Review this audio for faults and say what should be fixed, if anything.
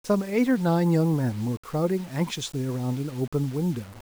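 Grainy, signal-following distortion runs through the whole speech clip, sitting roughly 25 dB below it. Quiet passages turn gritty. This is likely low bit depth without dither, consistent with rounding to about 6 bits. To prevent it, keep the audio at 16 bits or more, and add dither before any reduction in bit depth.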